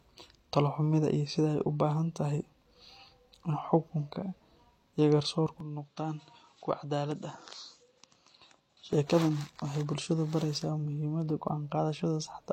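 Right after "iyo garsoorku", at 5.60 s, the speech drops about 10 dB and loses everything above 7.5 kHz, with a faint new hiss, until 8.93 s. This is likely an input switched to a poorer device, not a filter, since level, tone and noise change together without a gap.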